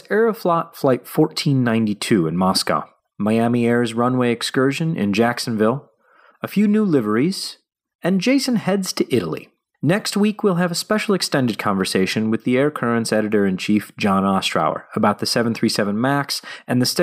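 No technical faults occur at any point in the speech, so there is nothing to describe in time order.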